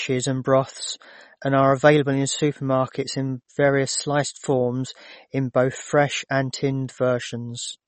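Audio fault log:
Throughout, MP3 compression: likely a starved low-bitrate encoder, around 32 kbps, cutting everything above 8.4 kHz and dropping weak detail, so the speech sounds dull, watery and swirly.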